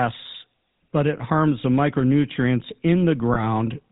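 Throughout, the speech has passed through the GSM full-rate codec, which rebuilds the voice from a vocal-tract model driven by sparse, evenly spaced pulses and discards everything above 4 kHz. The result is a plainly audible buzzy, gravelly roughness and a dulled top end, consistent with 13 kbps full-rate coding.

From 1.18 to 1.21 s, just before "harms the micronutrients", and again from 3.34 to 3.47 s, there are lost GSM frames. The decoder covered each gap by repeating the last good frame, so the sound briefly hangs as a rough, metallic ring rather than dropping out.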